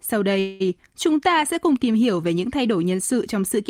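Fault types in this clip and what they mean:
Call audio freeze: At about 0.39 s the speech stalls and the last bit of sound gets stretched into a fading buzz or hiss for roughly 0.21 s, until things pick up again at 0.62 s. It never drops to true silence, and nothing afterwards seems skipped; the speech just resumes where it left off, now running about 208 ms late. That's likely packets held up in transit, with the jitter buffer running dry and the receiver filling the wait.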